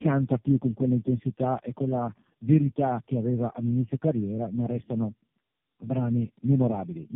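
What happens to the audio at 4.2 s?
The speech at 4.2 s carries tandem speech coding, which runs through the whole clip. The call crossed several links that each decode and re-encode with their own codec, and the sound fits three low-rate AMR-NB passes in a row, with G.711 stages in between. Each coder works on the previous one's damaged output, so the errors pile up. The speech is rough, muffled and warbly, with nothing above 3.5 kHz.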